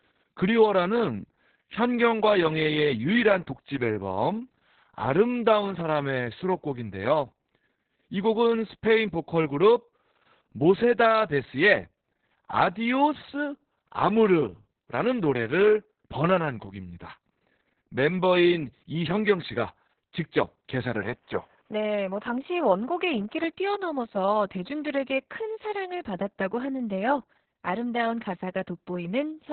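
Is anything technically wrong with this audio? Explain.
Yes. Opus voice compression runs through the whole speech clip. The coder is working in its narrowband linear-prediction (SILK) mode, so nothing is left above about 4.5 kHz, and the excitation is modelled so coarsely that the damage is heavy. The voice sounds muffled, hoarse and faintly robotic, which fits a bitrate around 6 kbps. A simple low-pass filter would dull the top without the buzzy, synthetic roughness, and that roughness is what marks this as a codec.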